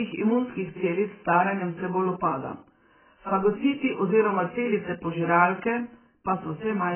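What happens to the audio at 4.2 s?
At 4.2 s the speech is dull and smeared, as it is across the whole clip: nothing survives above about 3.1 kHz, and sibilants turn to a warbling, fizzy wash. The likely cause is heavy AAC compression, a coder that quantises each frame's spectrum so coarsely that it drops the top band and leaves holes, which fits a very low bitrate near 8 kbps. A simple low-pass filter would darken the sound just as much but without that swirling texture.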